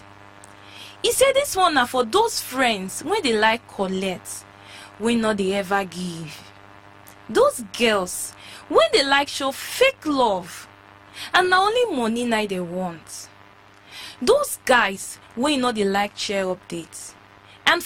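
No technical faults are audible anywhere in the audio.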